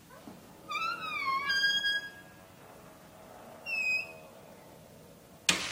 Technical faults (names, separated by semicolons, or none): none